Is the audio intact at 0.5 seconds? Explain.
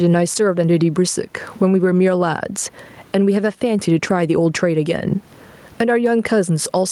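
No, gain pumping runs through the whole clip, so 0.5 s is affected too. The gain is likely set far too high and a fast limiter keeps clamping it, so the gain swings by around 15 dB, with the room noise sitting about 44 dB below the speech, leaving everything squashed.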